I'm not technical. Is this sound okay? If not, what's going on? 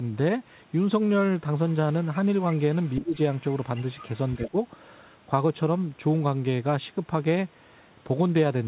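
No. At several points a faint second voice can be heard underneath the talker: brief scraps at about 1.7, 2.5 and 2.85 seconds, then longer stretches from 3.36 to 4.09 seconds and from 4.27 to 4.47 seconds. This is the other side's voice leaking through. The likely cause is that the talker's device was playing the other person on a loudspeaker, and the microphone picked it up again without it being fully cleaned out.

Twice, the talker's own voice suddenly sinks for a split second: from about 2.99 to 3.14 seconds, quite noticeably, and again from 4.49 to 4.57 seconds, more mildly. This is speech suppressed in double talk. Both people were likely speaking at the same moment, and the call's echo-removal system could not tell the two voices apart, so it turned everything down for a moment.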